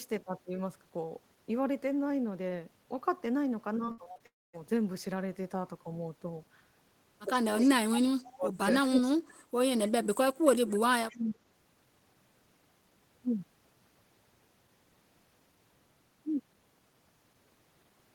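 From 3.85 to 4.22 s, repeated packet loss produces a choppy, robotic sound. There are five short gaps, the longest 60 ms, each patched by extending the preceding audio.

From 4.26 to 4.55 s, a long network dropout is the likely cause of a brief fading buzz, then near-silence, with about 280 ms of speech missing.

Speech is suppressed in double talk at 7.62 to 8.53 s, 8.89 to 9.37 s and 11.11 to 11.45 s. It dips by up to around 30 dB, likely because the echo canceller attenuated both sides at once.

Echo leak appears at 8.25 to 8.34 s, 9.86 to 9.91 s, 10.73 to 10.78 s and 11.11 to 11.18 s as a faint copy delayed by 265 ms, about 25 to 30 dB below the speech, likely loudspeaker pickup passed back.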